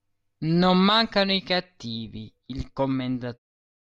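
Nothing stood out on listening to this speech, which eases out with a smooth fade at the end.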